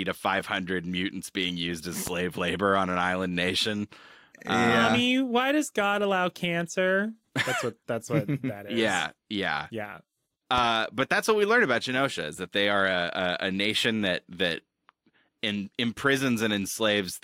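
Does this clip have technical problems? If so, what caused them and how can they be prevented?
Yes. Two loud pops, at 2.07 to 2.10 s after "mutants being used as" and at 10.58 to 10.60 s after "is yeah yeah yeah", each a single sharp pulse about 10 dB above the speech, which continues underneath. Likely cause: a voltage spike from a connector, switch or static. Secure cables and avoid plugging or switching gear while recording.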